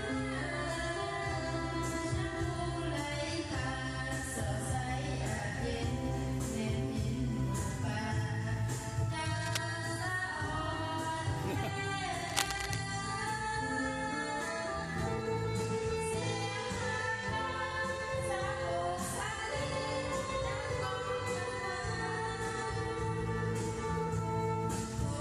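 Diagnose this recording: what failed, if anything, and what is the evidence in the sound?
Two bursts of scratchy, crackling rustle sit on top of the sound, from 9.04 to 9.63 s and from 12.29 to 12.78 s. The first is about 10 dB below the signal, and the second is louder, only about 5 dB below. This is cable scratch noise in the analogue wiring stage, likely from a worn cable, connector or control being moved. Its contact resistance fluctuated rapidly, adding dense, irregular noise while it was disturbed.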